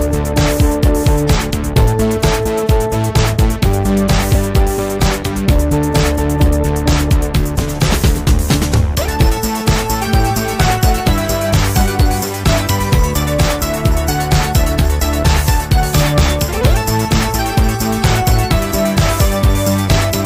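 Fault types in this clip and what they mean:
No technical faults detected across the clip.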